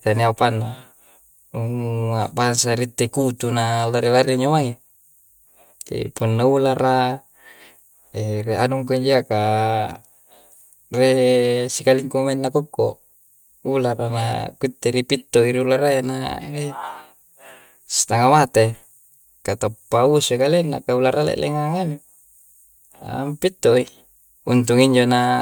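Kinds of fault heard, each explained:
No technical faults can be heard in this speech recording. The audio carries on without any dropouts, distortion, glitches or other disturbances.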